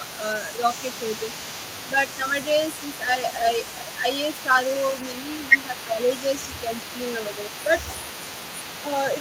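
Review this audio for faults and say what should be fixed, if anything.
A faint second copy of the speech trails the original by 341 ms, about 20 dB down, from start to finish. This echo leak is likely an echo canceller on a speakerphone leaving residual loudspeaker pickup. On a spectrogram, each syllable's harmonics reappear as a weaker, shifted ghost. Better canceller tuning or a headset would prevent it.

Speech suppressed in double talk appears as brief level dips at 0.0–0.24, 3.01–3.45, 3.84–4.03, 5.26–5.34, 5.66–6.0, 6.64–6.69 and 7.65–7.72 s. Most are about 5 dB deep, and the ones at the start and around 5.66–6.0 s reach about 10 dB. The canceller likely ducks the near talker while the far side overlaps. The waveform shows short notches in the envelope. A full-duplex canceller with gentler suppression would avoid this.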